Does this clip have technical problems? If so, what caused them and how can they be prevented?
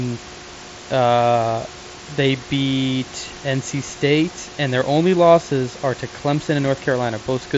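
No, this clip has no technical problems, so there is nothing that needs preventing.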